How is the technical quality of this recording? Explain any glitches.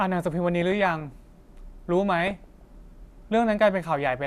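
The recording has two stretches of reception damage. DAB burbling at 0.62 to 1.12 s and 2.20 to 2.61 s: weak-signal bit errors, a fraction of a percent, corrupt sub-band samples, so the speech picks up short blips of noise.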